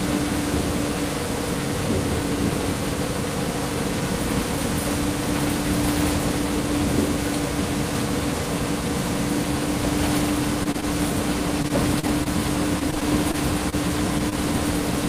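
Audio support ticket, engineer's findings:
Repeated packet loss (robotic sound), 10.63–10.84 s, 11.62–12.27 s, 12.79–13.74 s: clusters of 4–6 dropouts, longest 34 ms, each patched by extending prior audio, giving choppy texture.

Short concealed packet loss, 14.29–14.33 s: single brief hole filled by continuing preceding sound, then crossfaded back; heard as a short smear or wobble.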